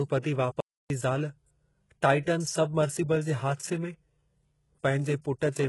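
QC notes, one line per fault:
Throughout: HE-AAC compression, likely cause of the heavy damage heard. The speech has no energy above 11.5 kHz, and its treble sounds rebuilt rather than real, with s sounds turning gritty and lispy because upper bands are copied from lower ones and harmonics fail to align, which fits a bitrate near 12 kbps.
0.60–0.90 s: playback stall. The speech cuts out in mid-flow for about 0.3 s of silence, then resumes. A player running out of data or having its output thread blocked is the likely cause, leaving the output empty until it recovers.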